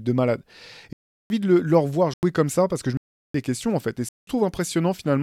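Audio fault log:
0.93–1.30 s, 2.14–2.23 s, 2.97–3.34 s, 4.09–4.27 s: block of digital silence. The speech drops to silence for about 370, 90, 370 and 190 ms, around "de le leur voir" and "ça parce que je". The lengths are power-of-two multiples, which fits missed buffer fills. Each cut comes with no fade or masking, unlike a concealed packet dropout.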